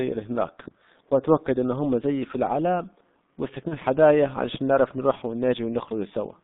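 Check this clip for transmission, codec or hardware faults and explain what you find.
Two faults are present: low-rate codec damage throughout, and one concealed dropout.

Throughout, G.723.1 codec damage is heavy. Its slowly updated 30 ms frame model makes the speech muffled and hoarse with smeared consonants, confined to about 150 Hz to 3.7 kHz, which fits its 6.3 kbit/s mode. This is steady colouring, not intermittent breakup.

From 3.68 to 3.78 s, VoIP packet loss concealed by the speech codec. The decoder extrapolates its last frame, consistent with one lost 30 ms frame, producing a fading smear rather than a hard silent gap.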